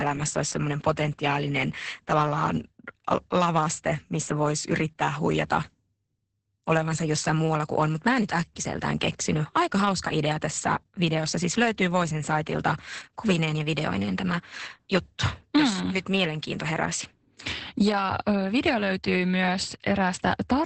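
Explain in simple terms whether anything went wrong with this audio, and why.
Throughout the recording, the speech carries heavy Opus voice compression. The codec's speech mode rebuilds the voice from a simple model in 20 ms chunks and discards everything above about 8.6 kHz, so it sounds muffled, slightly hoarse and a little robotic.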